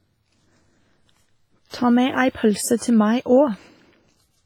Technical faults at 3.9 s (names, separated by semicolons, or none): WMA compression